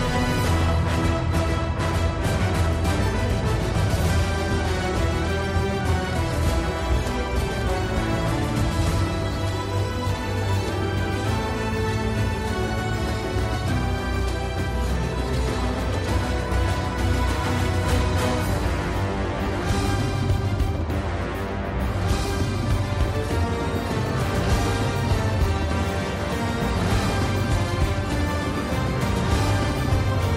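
Nothing stood out as a technical problem on listening.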